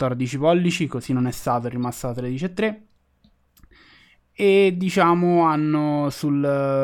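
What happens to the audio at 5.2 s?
Nothing goes wrong at 5.2 s; the speech carries on intact at that point, with no dropout, click or distortion.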